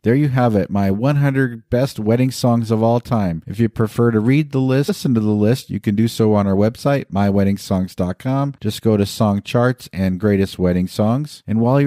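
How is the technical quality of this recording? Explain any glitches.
The recording has one glitch, caused by damaged data in a compressed stream, at 4.88 s. It lasts only about 16 ms. Part of the encoded stream there was corrupted, so the decoder misread those frames and had to find the next valid frame header. Unlike a click from a sample-level dropout, the disturbance comes from lost sync in the decoder.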